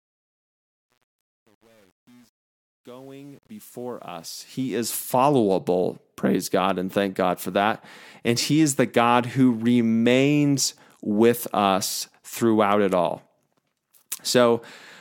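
From the start to 5.14 s, the speech fades in with truncation distortion on the fade. The gain stage drops low bits without dither, and the coarse steps suggest about 9-bit resolution. The grit is worst from 0.0 to 4.32 s, where the quiet speech sounds gritty. On the waveform the low-level signal becomes blocky square steps. The spectrogram shows harsh broadband hash tracking the speech until the fade-in clears at 5.14 s.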